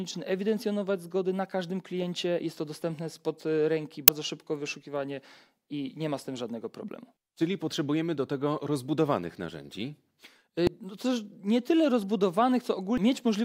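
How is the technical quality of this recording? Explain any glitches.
Three brief glitches break into the sound at 4.08, 10.67 and 12.98 seconds. Each is a sign of damaged data in the compressed stream: corrupted bytes make the decoder misread those frames and lose sync until it finds the next valid frame header.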